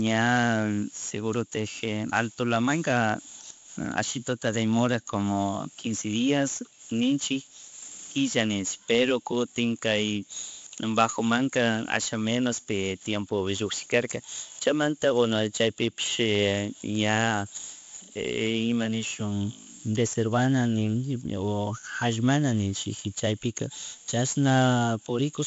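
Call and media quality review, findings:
4-bit ADPCM compression, throughout the speech: gritty hiss riding every loud syllable, rough distortion on sharp onsets where the adaptive step lags. Nothing above 7.7 kHz, dulling the top end; fits a 64 kbps stream at 16 kHz sampling. Heavy damage.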